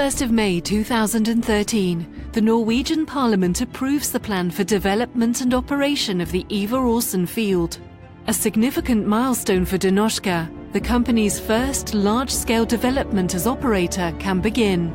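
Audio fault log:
No faults found in this recording.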